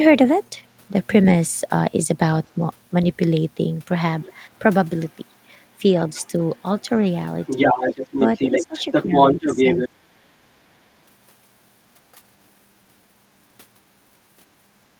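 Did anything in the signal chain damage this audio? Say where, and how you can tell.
Yes, and the damage sits in the call-processing stage. A second voice comes through faintly at 4.2–4.3 s, 5.11–5.15 s and 6.07–6.86 s, then at roughly full speech level from 7.42 to 9.89 s. This is the other side's voice leaking through, likely residual loudspeaker echo the canceller failed to remove. A spectrogram would show a second, unrelated set of harmonics layered over the talker's.

Speech is suppressed in double talk. Where the two voices overlap, the talker dips by around 10 dB at 7.92–8.02 s. From 8.6 to 10.37 s it is cut much deeper, by roughly 25 dB, in fragments totalling about half a second. The canceller is likely attenuating its own talker along with the echo. On the waveform this looks like bites taken out of the envelope, and the spectrogram goes dark in those slices.

The background is gated by the echo canceller at 12.12–12.23 s, where the room tone drops by about 6 dB for roughly 100 ms and then recovers. 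The suppressor clamped the microphone while the loudspeaker played. On a spectrogram the noise floor shows a brief, square-edged notch.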